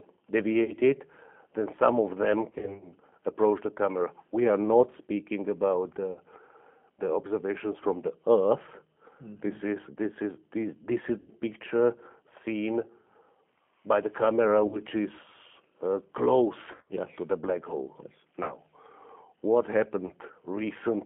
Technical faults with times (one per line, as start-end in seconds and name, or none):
0.00-21.06 G.729 codec
0.64-0.74 VoIP packet loss concealed by the speech codec
2.50-2.91 VoIP packet loss concealed by the speech codec
6.13-6.20 VoIP packet loss concealed by the speech codec
11.20-11.31 VoIP packet loss concealed by the speech codec
14.67-14.79 VoIP packet loss concealed by the speech codec
16.72-16.94 VoIP packet loss concealed by the speech codec
18.43-18.52 VoIP packet loss concealed by the speech codec
20.07-20.13 VoIP packet loss concealed by the speech codec